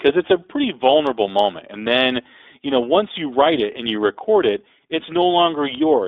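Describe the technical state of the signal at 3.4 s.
At 3.4 s the speech carries iLBC codec damage throughout, band-limited to about 300 Hz–3.6 kHz with a rough synthetic edge, which fits a 15.2 kbps mode. A spectrogram would show nothing above roughly 3.6 kHz.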